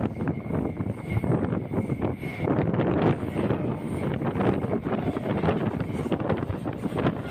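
No technical faults are audible anywhere in the audio.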